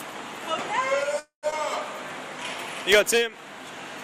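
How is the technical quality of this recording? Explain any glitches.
The recording has three network-related glitches, all before the last 0.2 s of the clip.

From 1.19 to 1.46 s there is a call audio freeze. The last sound carries on briefly as a fading tone, then goes silent for about 120 ms before the audio resumes where it stopped. This was likely delayed packets draining the jitter buffer, so about 233 ms of filler was added and nothing was lost.

From 1.51 to 1.55 s the audio makes a skip ahead. Roughly 150 ms of material is dropped, possibly to cut the delay the freeze built up. Playback jumps forward, joining the two sides with only a very short 11 ms fill, so it sounds abrupt.

From 2.97 to 3.75 s there is a jitter buffer slow-down. The receiver repeated pitch periods to rebuild its reserve, adding 50 ms. The audio plays at about 94% speed with unchanged pitch, so sounds are slightly drawn out, with a faint warble possible.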